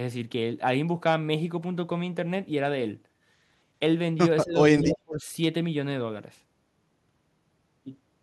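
The speech dips briefly at 4.44 to 4.56 s, then drops sharply at 4.82 to 5.29 s, likely speech suppressed in double talk by an echo canceller.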